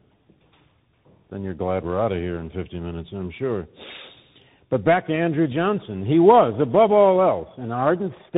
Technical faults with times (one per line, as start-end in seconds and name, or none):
0.00-8.38 tandem speech coding